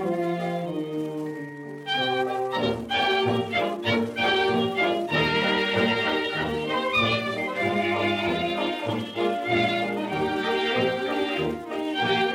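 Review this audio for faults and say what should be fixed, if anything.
No faults found in the review, so nothing needs fixing.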